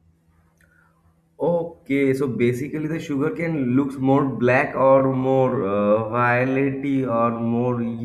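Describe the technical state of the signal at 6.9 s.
Time-stretched section, 4.79 to 8.05 s: likely repeating short pieces slowed the pace to 0.61 times at unchanged pitch, leaving the speech dragging.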